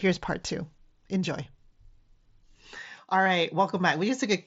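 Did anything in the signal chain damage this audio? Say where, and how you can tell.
Yes. Two brief glitches occur at 1.44 s and 3.25 s, each a tiny smeared repeat of the sound just before it rather than a silence. The first lasts about 7.5 ms and the second about 15 ms, which fits one and then two lost frames. This is concealed Bluetooth headset packet loss on the wireless link. Packets from the headset never arrived, and the phone filled each gap with a stretch copied from the preceding waveform, with the mSBC codec's mild graininess present on loud sounds.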